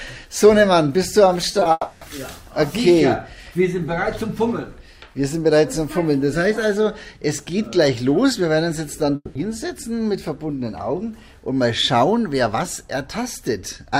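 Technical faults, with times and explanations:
1.51–1.55 s, 1.59–1.63 s and 1.63–1.67 s, short concealed packet loss: three brief gaps in quick succession, each with about 20 ms of audio missing, the last two back to back. The decoder bridged each hole by extending the preceding sound, repeating its pitch where it was voiced and substituting shaped noise where it was not, then crossfading into the real signal. This is heard as a quick smear or flutter just before the longer break.
1.71–2.03 s and 9.15–9.37 s, long network dropout: in the first stretch, about 300 ms of audio is replaced by a continuation of the last sound that buzzes or hisses and fades, followed by roughly 10 ms of silence before normal audio resumes. The second stretch behaves the same way, with about 200 ms of fading continuation and about 30 ms of silence. The likely cause is packets failing to arrive for a sustained period. 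The receiver's concealment filled the gap with decaying synthetic audio, and the original content of those stretches never plays.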